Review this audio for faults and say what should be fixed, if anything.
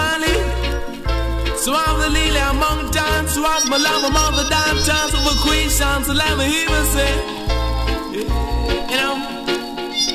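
Nothing to fix: no faults detected in this recording.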